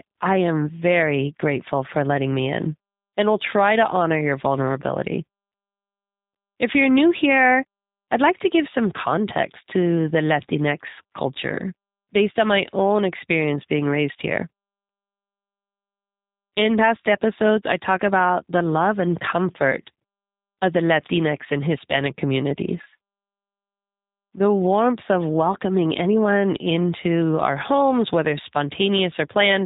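Throughout the speech, the audio carries plainly audible G.729 codec damage, which fits an 8 kbit/s rate. The voice is rebuilt from a vocal tract filter, pitch predictor and sparse pulses, giving a rough, slightly synthetic texture, and nothing passes above 3.8 kHz.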